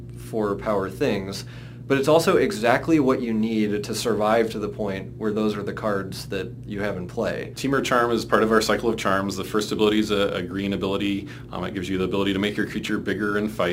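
Throughout the audio runs a gritty, inharmonic fizz from crude rate conversion, sitting roughly 30 dB below the signal and tracking loud, high material. Unlike steady quantisation hiss, it vanishes in quiet passages, which fits nearest-sample repetition stretching 44.1 kHz material to 48 kHz.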